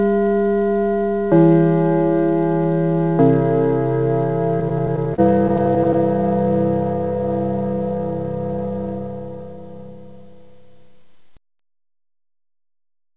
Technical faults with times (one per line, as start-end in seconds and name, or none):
4.60-5.96 repeated stalls (stutter)